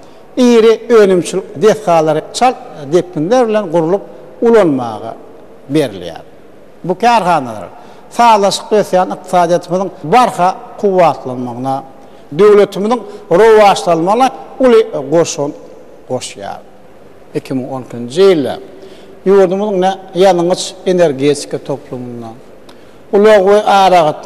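Nothing here stands out as a technical problem: the sound carries on steadily, with no audible interruptions or sudden changes anywhere along the way.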